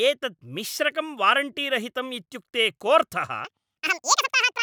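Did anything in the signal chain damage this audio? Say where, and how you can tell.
Yes. At the sample-format conversion stage, audio read two samples at a time from 3.45 s to the end runs at double speed, an octave higher, with harmonics spaced twice as wide on a spectrogram.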